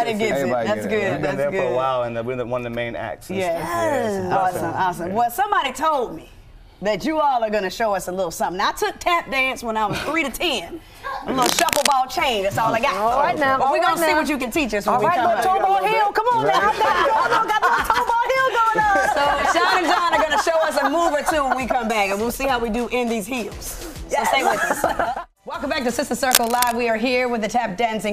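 Cable scratch noise at 11.40–11.93 s and 26.23–26.73 s: brief rustling bursts roughly as loud as the audio, likely from a worn cable or connector's fluctuating contact.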